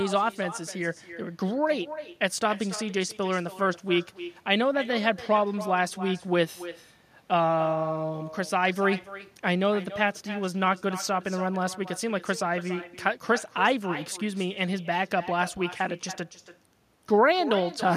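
From start to finish, every phrase of the speech is trailed by a fainter, thinner copy arriving roughly a third of a second later, about 14 dB below the original. This is echo with no canceller: the far end's loudspeaker feeds its microphone, and nothing strips that return before it travels back.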